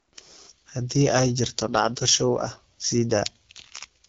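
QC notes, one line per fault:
Throughout: AMR wideband (HD Voice) codec damage, plainly audible. The speech carries a rough, raspy grain because the codec rebuilds it from a pulse-driven vocal tract model with too few bits to follow the waveform closely. That harshness fits one of the lowest AMR-WB modes, around 8.85 kbit/s. Nothing sits above 7.6 kHz, and the top band above about 6.4 kHz is shaped noise standing in for real detail.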